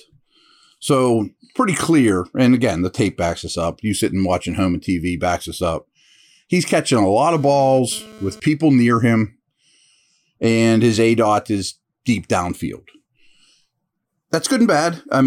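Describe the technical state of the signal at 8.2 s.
At 8.2 s, GSM phone buzz runs from 7.35 to 8.4 s, between "catching a lot" and "people near him". A nearby phone's data bursts, rectified at 217 Hz, give a raspy buzz about 24 dB down, seen as evenly stacked harmonic lines.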